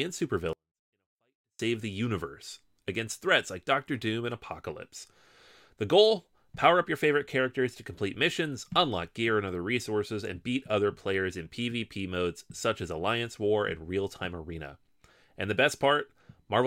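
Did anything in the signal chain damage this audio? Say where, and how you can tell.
Yes. Between 0.53 and 1.59 s the speech stays clean but falls about 48 dB, nearly inaudible, until it snaps back right before "the universe against threats". That's a 24-bit alignment error at the sample-format conversion stage: 24-bit samples sitting in the low bytes of a 32-bit word got read as full 32-bit integers.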